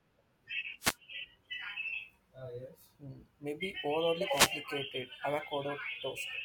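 Wireless microphone noise hits at 0.79–0.97 s and 4.26–4.59 s: the FM radio link fades as reflections cancel, letting receiver noise burst through as a brief swish of static over the speech.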